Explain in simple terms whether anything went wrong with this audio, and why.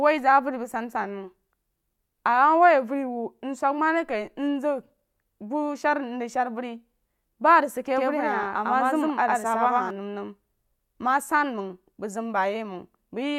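From 7.96 to 9.90 s there's a doubled audio track: the speech repeats about a tenth of a second behind, just as loud, likely from a slower second capture path.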